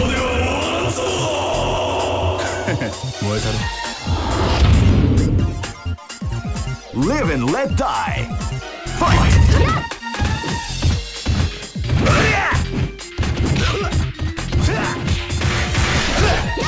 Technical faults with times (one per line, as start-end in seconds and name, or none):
none